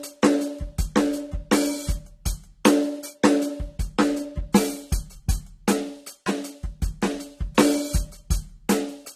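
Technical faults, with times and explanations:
Throughout, low-bitrate audio saved at a high bitrate: the music was likely encoded at a very low bitrate, fitting a 32 kbit/s AAC source, then re-saved as high-bitrate MP3. Nothing remains above 14 kHz, because re-encoding cannot restore what the first pass discarded.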